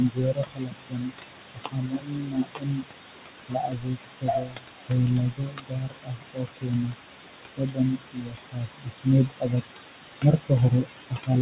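Noise suppressor artifacts run through the whole clip. The suppressor pushes the steady room background down by about 21 dB frame by frame, so the noise sinks away between phrases and surges back under the speech.

Speech cut by the noise suppressor occurs at 0.0–1.36 s, 1.54–2.89 s, 3.48–4.92 s, 5.1–6.96 s, 7.57–9.07 s, 9.26–9.63 s, 10.21–10.51 s and 10.7–11.3 s. Here the suppressor mistakes quiet parts of the speech for noise and turns them down by about 19 to 22 dB. Soft consonants and word endings sound swallowed. The damage covers one to one and a half seconds in each of the first five spans and only short fragments in the last three.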